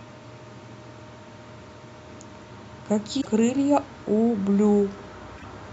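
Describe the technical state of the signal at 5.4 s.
At 5.4 s the compressed speech stream carries damaged data: from 5.34 to 5.44 s some bytes in the encoded frames are wrong, so the decoder cannot read those frames correctly, loses its place and has to hunt for the next valid frame header before it can resume. For roughly a tenth of a second the speech gives way to a short chirp, squawk, click or hole.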